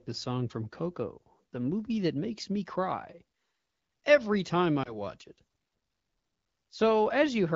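Speech, carried over an AMR wideband (HD Voice) link with light codec coloration. Lost AMR speech frames cause a brief dip or warble from 4.83 to 4.97 s, just after "every time". This fits a single lost 20 ms frame: the decoder repeated the last good pitch and vocal tract settings at falling gain, and the voice recovers weak or rough for a moment.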